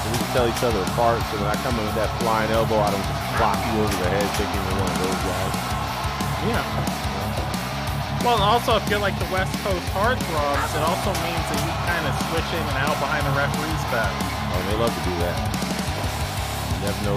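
Nothing technically wrong turns up anywhere in this audio, so there's no fault to point to or explain here.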